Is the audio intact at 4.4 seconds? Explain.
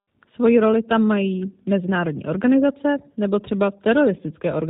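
No. At 4.4 s, as across the whole speech clip, the audio sounds rough and slightly synthetic, with nothing above 4 kHz. This is G.729 codec damage. The speech is rebuilt from a vocal tract model and sparse pulses rather than the original waveform, consistent with an 8 kbit/s stream.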